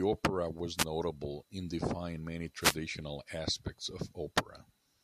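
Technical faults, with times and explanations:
0.77 to 0.84 s and 2.60 to 2.77 s, wireless microphone noise hit: two quick bursts of static swish over the speech, the first about 70 ms and the second more than twice as long at about 170 ms. That's the radio link from an analogue FM mic dipping as reflected signals cancel the direct one. The receiver's noise floor jumps up for that moment until the signal comes back.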